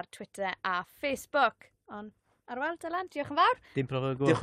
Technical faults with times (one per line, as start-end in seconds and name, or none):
none